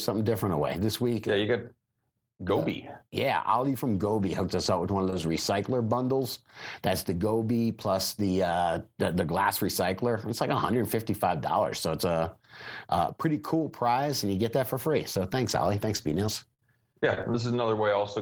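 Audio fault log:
4.65–5.37 s, lost packet rebuilt from error correction: thirteen separate 10 ms packets replayed from low-bitrate copies carried by following packets, so no gap but rougher, noisier sound.
5.10 s and 5.21 s, short concealed packet loss: about 10 ms missing each time, filled by continuing the last sound then blending back, heard as a brief smear.
15.13–18.00 s, scattered short gaps: around ten lost or late packets, each patched by continuing the last sound; gaps reach about 50 ms, roughly 7% of the stretch.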